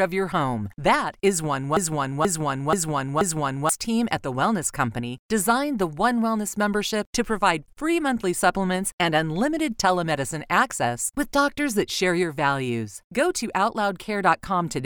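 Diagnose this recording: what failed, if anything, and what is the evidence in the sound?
Broken-record loop from 1.77 to 3.69 s. A 0.48 s fragment repeats four times. Likely a playback stall resending its last buffer. Underlying speech is lost.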